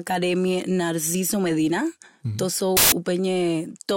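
Samples built from the wrong bytes, 2.77 to 2.92 s: misassembled sample bytes push the rapidly changing low bits into the high positions, producing a brief burst of loud, harsh broadband noise.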